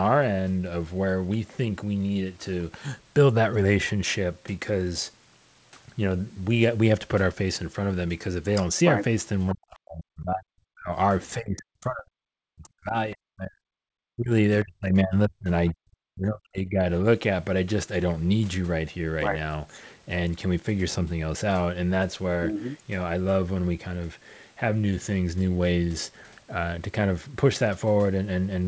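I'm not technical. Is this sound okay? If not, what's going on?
No. Between about 9.5 and 16.9 seconds the speech repeatedly sinks almost to silence or breaks into pieces: from 9.54 to 10.93 s, 11.34 to 13.93 s, 14.13 to 14.32 s, 14.63 to 15.51 s and 15.73 to 16.85 s. This is most likely speech suppressed in double talk. The person on the other end of the call seems to have been talking at the same moment. The call's echo-removal system couldn't tell this voice apart from the other person's voice coming out of the loudspeaker, so it turned everything down. A network dropout sounds different. It leaves short, random gaps. These dips cluster only where the two people overlap.

For a brief moment, at 15.68 to 15.73 s, just before the last dip, a faint scrap of a different voice slips through. This is likely the other side's voice leaking through. The call plays the far person over a loudspeaker, the microphone picks that up again, and the echo removal missed this tiny piece. 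Ordinary background chatter would sound steady and spread out. This is a single, very quiet fragment of a second voice, and it sits right where the suppression kicks in.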